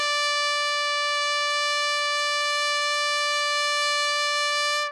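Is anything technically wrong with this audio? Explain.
Yes. HE-AAC compression runs throughout the music. The damage is heavy, with nothing above 11.5 kHz, likely from HE-AAC at a bitrate near 12 kbps. The treble is rebuilt from copied lower bands, so its harmonics misalign and sound gritty and metallic.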